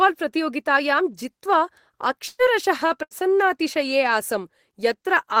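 At 2.27 s the speech breaks up in a burst of packet loss: about 120 ms of audio never arrives, and the receiver fills roughly 116 ms by stretching the last sound and fading it, then leaves a brief 10 ms silence before resuming past the gap. At 3.03 s a second burst drops about 80 ms, concealed over 76 ms. On a spectrogram each shows the last sound held and tapering in level, and the waveform shows a decaying stretch before an abrupt restart.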